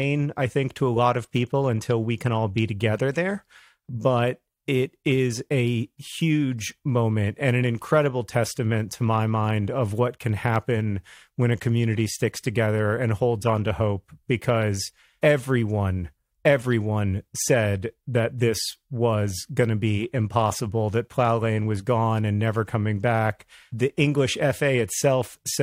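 A recording of speech in which no technical fault can be heard at any point, with the signal staying continuous and steady throughout.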